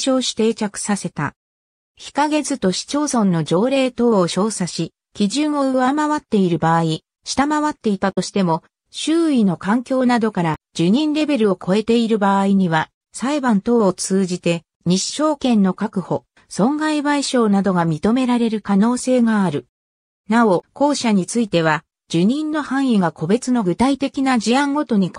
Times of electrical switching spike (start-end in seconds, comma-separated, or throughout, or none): none